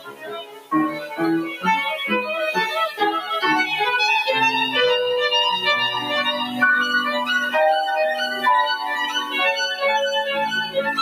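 A noise suppressor built for speech runs on this sound throughout, treating steady material as noise. Levels swing by around 10 dB, so held parts pump and thin. The suppressor also cuts sound outright from 0 to 0.72 s, dropping about 17 dB, then 0.9 to 1.21 s and 1.43 to 1.65 s, about 9 and 11 dB.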